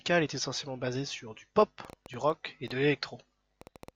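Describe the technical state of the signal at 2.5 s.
At 2.5 s, a train of clicks ticks over the speech, about as loud as the speech itself. Around six sharp, similar pops per second come at an uneven pace. The train starts at 1.62 s, just after "essentiellement basée sur du", and runs to the end, roughly fifteen clicks in all. It is likely interference or a faulty connection or power supply injecting repeated pulses.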